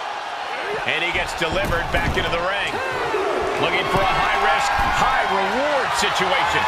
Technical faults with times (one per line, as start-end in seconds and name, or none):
none